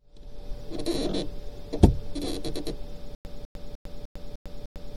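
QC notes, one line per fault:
3.15 s to the end – stutter with silent gaps: a 201 ms fragment of the sound plays, drops into dead digital silence for 101 ms, then the identical fragment returns. This repeats six times at a steady 302 ms pace until the clip ends, and the sound that should have followed 3.15 s never arrives. The likely cause is a stalled player or stream that replayed its last buffered fragment on each retry, then ran empty before fresh data came in.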